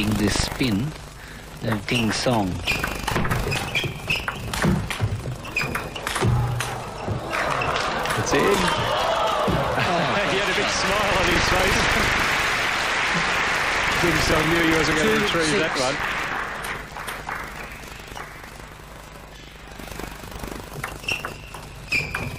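No technical faults are audible.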